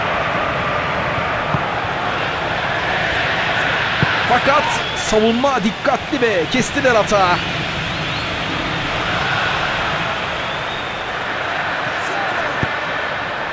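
No technical faults can be heard anywhere in this audio. Nothing in it points to a problem in how it was captured, processed or delivered.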